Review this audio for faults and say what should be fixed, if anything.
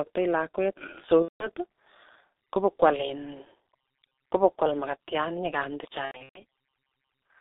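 The whole clip passes through the G.723.1 codec at about 6.3 kbit/s, with the line limited to roughly 250 Hz to 3.7 kHz. Its 30 ms frames and slowly updated voice model leave the speech muffled and hoarse, with heavily smeared consonants. Carrying the call on a wideband codec at a higher bitrate would prevent this.

VoIP packet loss, concealed by the speech codec, occurs twice. From 1.22 to 1.48 s about 180 ms of audio is lost, and from 6.05 to 6.40 s about 240 ms is lost in scattered gaps spread over 300 ms, the longest lasting 120 ms. Each time, the decoder repeats its last pitch and filter at falling gain. The speech turns into a fading buzzy tone or coloured noise and stays weak briefly after packets resume. A jitter buffer with forward error correction or packet redundancy on the network path would prevent these dropouts.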